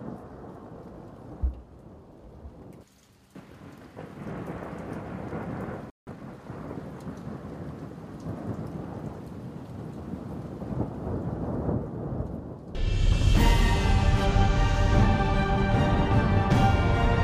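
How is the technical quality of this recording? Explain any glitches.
The recording has one clear glitch, a brief dropout followed by a hurried stretch, at around the 6-second mark.

A playback stall occurs from 5.90 to 6.07 s, cutting the sound off mid-flow for about 170 ms. The player likely ran short of data or had its output thread held up, so nothing reached the output until it recovered. It is heard as an abrupt gap of silence, after which the sound resumes rather than simply fading back in.

Time-compressed catch-up follows immediately, from 6.07 to 6.39 s. To recover the time lost in the gap, the player trimmed small slices from the queued audio and cross-faded the remaining pieces together, running at about 1.5 times normal speed for roughly a third of a second. Pitch stays where it should be, but the sound comes across as rushed.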